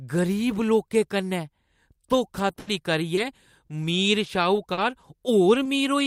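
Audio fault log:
2.39–5.03 s, scattered short gaps: about five brief dropouts over this stretch, the longest well under a tenth of a second, totalling 180 ms of missing audio. The receiver patched each by extending the preceding sound over 240 ms, leaving small ticks, smears and hiccups in otherwise clear speech.
5.63–5.67 s, short concealed packet loss: 20 ms of audio arrived too late for the decoder. The gap was filled by continuing the last sound, carrying its pitch forward if voiced or shaped noise if not, then crossfaded back into real audio, giving a brief smear or wobble.
5.65 s, lost packet rebuilt from error correction: a lost packet was recovered from the lower-bitrate duplicate carried in the following packet, as Opus in-band forward error correction does. That 20 ms frame plays without a gap but sounds rougher and grainier than the surrounding audio.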